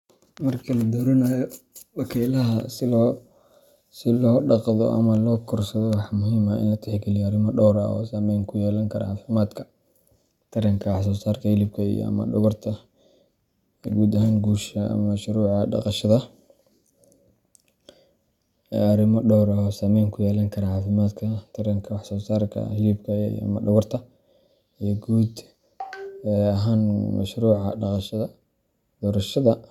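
No technical faults are audible.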